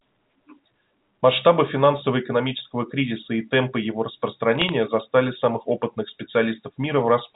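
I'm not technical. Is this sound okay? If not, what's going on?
No. Bit errors on a digital phone line corrupted a few stray pieces of data, which you hear as brief clicks and crackle from about 4.55 to 4.72 seconds.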